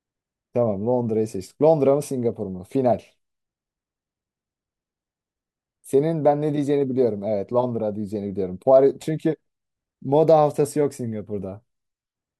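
At 9.01 to 9.04 s, a corrupt frame decoded into the speech produces a brief, harsh blip lasting about 36 ms. Flipped bits damaged what looks like a single compressed frame. The decoder played it anyway. Misread codes and gain values placed energy at frequencies where none belonged. The result is a short burst of squeaky noise, peaking at about -25 dBFS, which cuts across the speech for the length of that one damaged frame.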